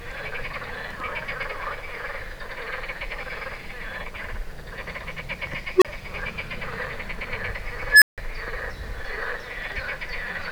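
At 5.76 s there's an unstable filter: a recursive stage blows up, a tone near 400 Hz swells over about 58 ms, clips, then drops out for 30 ms. It repeats at 7.89 s, higher, around 1.5 kHz, building over 126 ms before 160 ms of silence.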